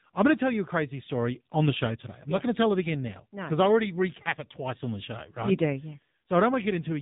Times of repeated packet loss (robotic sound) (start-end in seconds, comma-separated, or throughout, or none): none